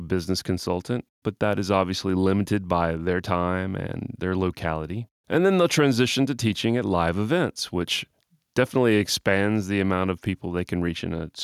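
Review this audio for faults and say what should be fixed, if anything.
Nothing stood out on listening to this speech recording, so there is nothing here that needs fixing.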